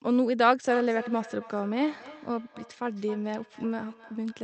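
From 0.69 s to the end, there's a feedback echo between two devices. A second device in the room replays the call and its mic sends it back, so the sound returns about every third of a second, peaking at about 16 dB below the speech.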